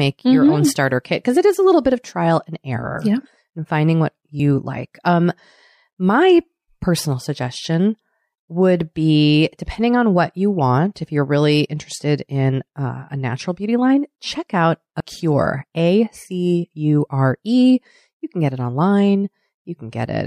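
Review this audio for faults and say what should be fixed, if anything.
Compressed frames are skipped twice. At 4.39 s, after "finding what", about one frame drops out. At 15.0 s, between "beauty line check out" and "cure a c u", about two vanish. The speech jumps ahead roughly 30 ms and 50 ms, which fits a 26 ms frame. Verify file integrity after encoding and transfer, and replace any damaged frames.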